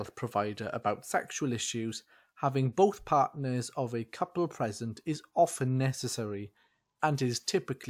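No technical faults are audible.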